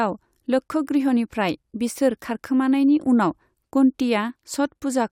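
No technical faults can be heard anywhere in the speech.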